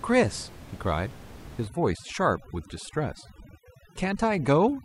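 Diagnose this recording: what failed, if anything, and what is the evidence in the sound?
Overdone noise removal in the call processing kicks in from 1.68 s to the end: the room noise about 19 dB down collapses into twinkly specks.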